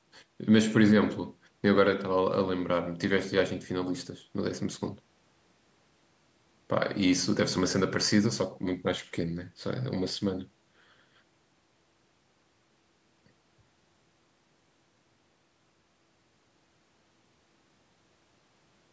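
No technical faults turn up anywhere in the speech, which carries the ordinary marks of call microphone processing: the lowest bass is trimmed and nothing extends above 8 kHz.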